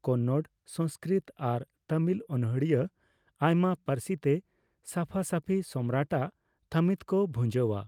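No technical faults are audible.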